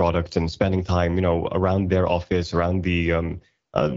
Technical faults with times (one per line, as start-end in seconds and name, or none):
none